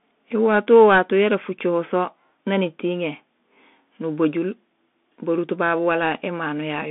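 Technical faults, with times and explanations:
Throughout, Bluetooth CVSD headset codec: the speech sits in a narrow telephone band, roughly 200 Hz to 3.6 kHz, with nothing at all above 3.8 kHz. The codec damage is plainly audible. CVSD sends just one up-or-down bit per sample, which fits a 64 kbps link, and adapts its step size as it goes. Loud, quick high content outruns that step, so the s sounds come out scratchy and a grainy hiss rides under the speech.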